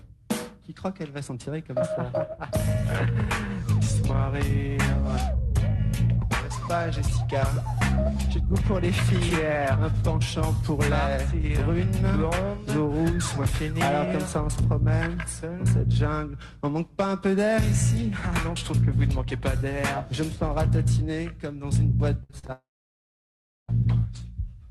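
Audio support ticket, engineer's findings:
Repeated packet loss (robotic sound), 22.23–22.50 s: four short holes, longest 57 ms, nearly half the span filled by concealment that stretches the last sound, giving choppy texture. Probable component: Opus receiver concealment on the call path.

Long network dropout, 22.52–23.70 s: brief decaying fill, then about 1.04 s of silence before audio resumes with that stretch missing. Likely cause: an extended network outage, with the jitter buffer concealing briefly and then giving up.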